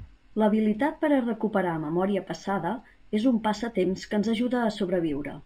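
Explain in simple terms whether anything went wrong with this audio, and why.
Imaging from linear upsampling runs through the whole clip, from start to finish. The recording seems to have been made at a low rate, which points to about 12 kHz, and then stretched to a higher rate by simply joining the samples with straight lines. That crude method dulls the top of the speech and leaves a faint mirrored copy of the sound between about 6 and 12 kHz, heard as a light metallic shimmer on hissy consonants.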